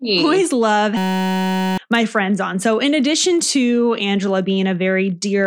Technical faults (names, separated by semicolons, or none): system hang loop